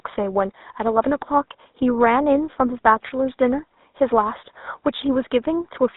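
From start to end the speech carries GSM full-rate codec damage, a buzzy, gravelly roughness with nothing above 4 kHz, which fits 13 kbps; room noise sits about 54 dB down.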